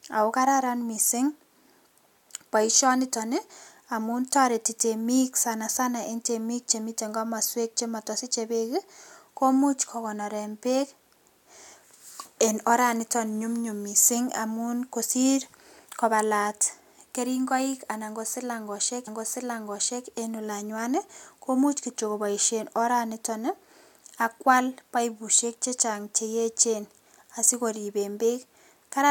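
A speech clip with a stream segment repeated at 19.07 s, just after "kobalat keringoik anan kosilangoshek": the player fed the same chunk through twice, so about a second of audio, up to 20.06 s, plays again, with a small blip where it jumps back.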